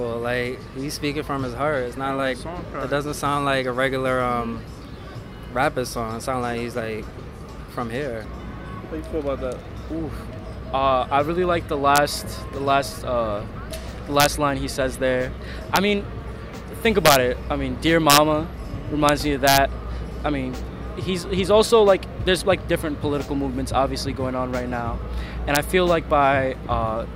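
Integer overflow cracks occur at 11.96–11.98, 14.20–14.26, 15.76, 17.06–17.16, 18.10–18.18, 19.09, 19.47–19.58 and 25.55 s. Peaks pushed about 0 to 3 dB past full scale wrap to the opposite sign instead of limiting, giving violent cracks far sharper than clipping.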